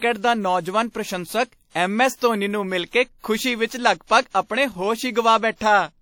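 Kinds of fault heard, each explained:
WMA compression: The speech was likely passed through a Windows Media Audio encoder, a transform codec that quantises the signal in long blocks, with damage consistent with a bitrate near 48 kbps. Coarse quantisation leaves plainly audible codec damage throughout: a ringing, washy quality and a hiss that swells and fades with the speech, while nothing survives above 19 kHz.
pre-echo: The encoder spread its quantisation noise across a whole block, and a sharp attack fell late in one of those blocks, so noise scaled for the loud onset also filled the near-silent gap before it. From 3.18 to 3.24 s, about 57 ms of hiss arrives just ahead of the attack, and the onset itself sounds softened and smeared rather than crisp.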